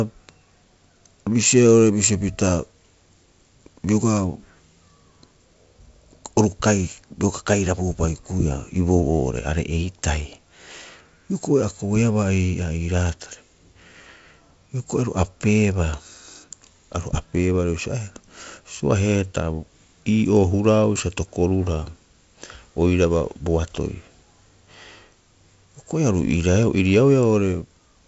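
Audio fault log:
Nothing to log here: this speech comes through G.722 wideband telephone coding working as it should, with the sound topping out at about 7.7 kHz, which fits that codec.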